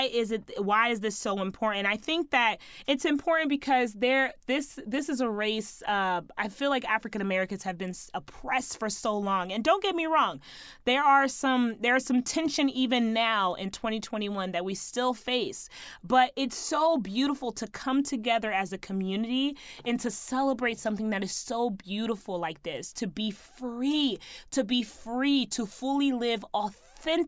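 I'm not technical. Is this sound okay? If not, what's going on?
Yes, no faults heard.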